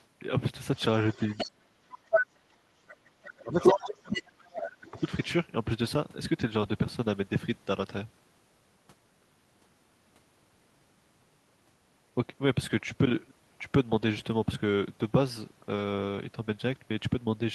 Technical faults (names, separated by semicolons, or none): other side's voice leaking through; speech suppressed in double talk